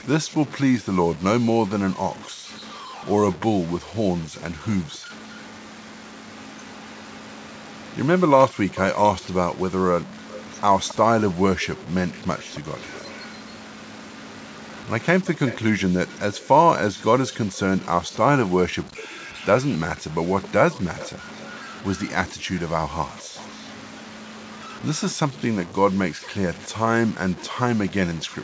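From start to end, the sound is grainy and gritty, and the grit tracks the signal. Quiet passages break up most. This is likely low bit depth without dither, around 6 bits, truncated. The error sits only some 20 dB under the sound.

At 2.29 to 2.49 s, the background is gated by the echo canceller. The room sound drops by about 40 dB, then returns. It happens again at 4.99 to 5.11 s and 26.15 to 26.26 s. Each dip is brief.

Echo leak follows. A faint delayed copy trails the speech by 271 ms. It is heard at 2.58 to 3.38 s, 4.69 to 8.99 s, and 10.01 to 28.26 s. The likely cause is a far-end loudspeaker the canceller did not fully clean. The copy grows a little louder in the last stretch.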